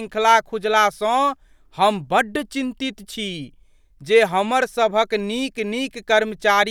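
Nothing in this recording stands out as a technical fault at any point, so there's nothing to flag here.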